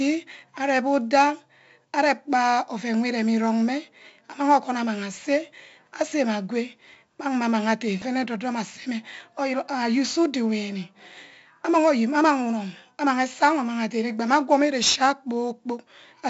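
A gritty hiss rides on every loud stretch of the speech from start to finish, with roughness on sharp attacks and nothing above about 7.7 kHz. This is heavy 4-bit ADPCM compression at 64 kbps, which fits a 16 kHz sample rate.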